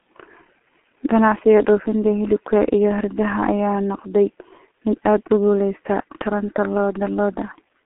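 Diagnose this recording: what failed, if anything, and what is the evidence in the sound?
The failure sits in the codec stage: the speech passed through a G.723.1 codec on a narrow telephone line. Throughout, nothing is heard above 3.9 kHz and little below 250 Hz, and heavy coarse modelling leaves the voice muffled and hoarse with smeared consonants, which fits a rate near 6.3 kbit/s.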